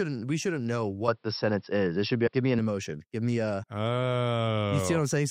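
From 1.08 to 2.59 s the audio turns dull and boxy. Everything above 5.5 kHz disappears, the level shifts by roughly 5 dB, and a faint new noise floor sits far below the signal, around 50 dB down. There is no gap at either transition, so the change is abrupt but continuous. On a spectrogram this looks like a flat ceiling at 5.5 kHz across that span, with the full band returning at 2.59 s. The likely cause is an input switched to a poorer device, such as a lower-grade microphone or a headset's call profile, which passes a narrower band and has its own tone and noise. Compressed frames are also skipped twice: from 2.26 to 2.28 s, where roughly 70 ms of audio is jumped over, and at 3.62 s, where about 30 ms is lost. Both jumps match whole multiples of a 26.1 ms codec frame. On the waveform each appears as a small discontinuity in the envelope, and on the spectrogram as a narrow vertical seam where the patterns fail to line up.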